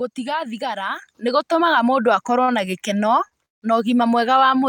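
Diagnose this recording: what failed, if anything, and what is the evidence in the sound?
At 1.02 s the whole picture jumps up by about 7 dB in one step, speech and background noise together, which is the giveaway for a microphone volume stepped up. That happens in call processing: the software decided the mic was too quiet and raised the device's input volume at once. No ramp, just a clean level shift.

There are two short stalls from a late packet, one at 2.44 to 2.50 s and another at 3.28 to 3.33 s. In each, the sound is held about 36 to 39 ms too long, and then picks up exactly where it left off. That's the jitter buffer running dry when a packet shows up late, so this is network timing, not loss.

The longer break runs from 3.45 to 3.64 s. The last sound is carried on briefly, then there's roughly 160 ms of near silence before the audio resumes from the same point, with nothing dropped. 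It sounds like a call audio freeze, likely packets held up in the network long enough that the receiver emptied its buffer and padded the gap about 166 ms in all.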